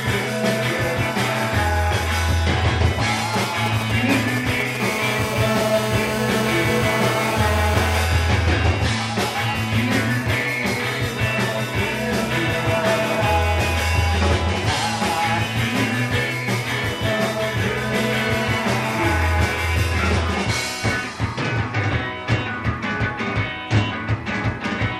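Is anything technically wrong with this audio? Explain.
Yes, there is interference from a nearby 2G mobile phone in two phases.

From 3.34 to 4.77 s come GSM signalling bursts. The phone transmits only short clusters of radio pulses while it negotiates with the network, and the audio circuitry rectifies them. What you hear is a galloping dit-dit-dit of brief buzzes pulsing at about 217 Hz, sitting around 5 dB under the programme. Its stuttering, gated rhythm is what separates it from the continuous buzz that follows.

From 4.80 to 8.05 s the phone has moved into a call and transmits steadily, giving GSM phone buzz. The 217 Hz burst rate, demodulated by the circuit, produces a hard, raspy, harmonically dense tone at about 6 dB below the signal, nearly steady and unrelated to the underlying sound. Unlike mains hum at 50 or 60 Hz, its fundamental sits at 217 Hz and its edge comes from sharp pulses rather than a smooth waveform.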